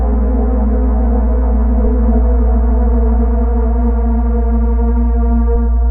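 Listening to these sounds, nothing technically amiss stood out at any point.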